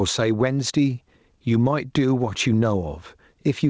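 Gain pumping runs through the whole speech clip: the level swings by around 10 dB as the talker's loud sounds pull the gain down. The likely cause is input gain set far too high, with a fast limiter clamping down on each loud syllable. Unlike a noise gate or noise suppressor, which cut the background in the gaps, here loud and soft passages sound squashed together. The call codec's top end stops at 8 kHz.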